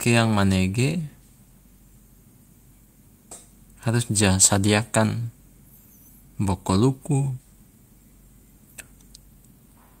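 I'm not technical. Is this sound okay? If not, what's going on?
Yes, nothing sounds wrong with this speech.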